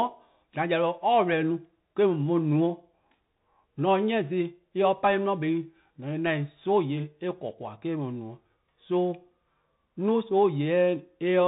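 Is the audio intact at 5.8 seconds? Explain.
No, at 5.8 seconds the speech runs through a Bluetooth CVSD headset codec: one-bit up-down steps with an adaptive step size, and nothing above 4 kHz passes, leaving scratchy s sounds and granular hiss.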